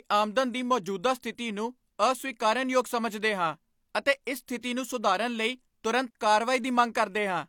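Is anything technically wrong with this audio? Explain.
Yes. Pre-echo occurs at 4.25 s and from 4.61 to 4.63 s. Codec block noise leaks 18 and 22 ms ahead of each attack, adding hiss that softens the onset and shows as a spectrogram smear before the transient.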